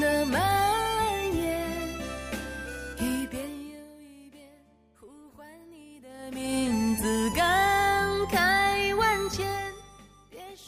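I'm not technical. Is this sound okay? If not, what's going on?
No. Zipper noise: at 3.12 to 3.88 s the volume drops, and at 6.06 to 6.57 s it rises, in rough steps that click about twenty times a second instead of gliding smoothly.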